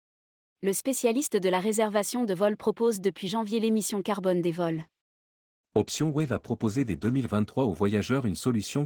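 At 4.75 s the speech turns coarse and muffled in a call bitrate drop that lasts until about 7.25 s. The connection's bandwidth estimate fell, so the encoder had to squeeze the signal into far fewer bits, which fits a fall from 32 kbps to around 13 kbps held for roughly 2.4 s. The result sounds rough and watery. On a spectrogram the upper bands go dark across that stretch, with the cut-off edge recovering at 7.25 s.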